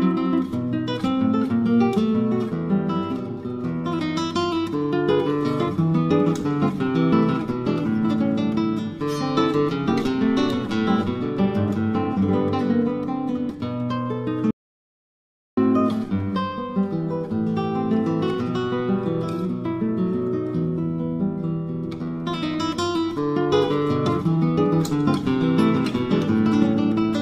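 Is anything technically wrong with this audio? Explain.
Yes. At 14.51 s the audio drops out to silence for about 1.06 s, until 15.57 s. The gap is silent, without room tone. The input was likely lost while recording continued.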